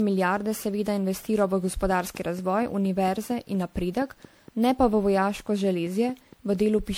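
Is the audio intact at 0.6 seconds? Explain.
No. At 0.6 s the speech carries generation loss, which runs through the whole clip: a swirly, hollow, smeared quality with softened consonant attacks. It is likely the result of about ten rounds of lossy encoding, each requantising on a shifted frame grid so the errors pile up, in a way that fits 96 kbit/s MP3. On a spectrogram, expect patchy holes and blurred onsets above a few kHz; the waveform's transients look rounded.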